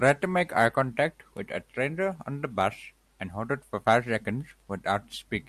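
From about 0.12 s right through to 5.42 s there's a run of clock slip clicks: faint, evenly spaced ticks roughly every 0.07 s, around seventy of them, close enough together to blur into a light rattle under the speech. The likely cause is two devices running on unsynced clocks, off by something like 300 ppm, so a single sample keeps getting dropped or repeated each time the drift adds up to a whole one.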